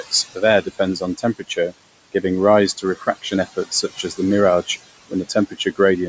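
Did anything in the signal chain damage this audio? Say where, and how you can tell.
Yes. The damage happens at the call processing stage, in the noise suppressor. Noise suppressor artifacts run through the whole clip. The room noise sits about 15 dB under the speech. The suppressor pulls it down by about 20 dB in the gaps and lets it back up under the speech. You hear the background pump with each phrase. This comes from the per-band gain changing frame by frame.

The same suppressor also cuts speech. It misjudges quiet parts of the speech as noise and turns them down too. This happens in four spans: 0.62 to 1.73 s, dropping about 15 dB; 2.77 to 3.06 s, about 13 dB; 3.53 to 4.19 s, about 17 dB; and 5.09 to 5.79 s, about 18 dB. Only brief pieces within each span are hit, a few hundred milliseconds at most. Soft sounds there come across as swallowed.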